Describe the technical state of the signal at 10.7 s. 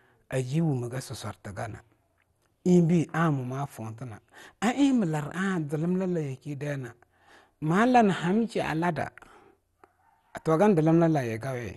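At 10.7 s the speech carries the same damage heard throughout the clip. The likely cause is MP2 compression at a low bitrate, around 64 kbps. Layer II divides the sound into 32 sub-bands and shares out bits among them. With so few bits, the top bands are shut off, leaving nothing above 12.2 kHz. The remaining bands are coarsely quantised and flicker in and out. The result is plainly audible: a dull tone with a gurgling, granular roughness.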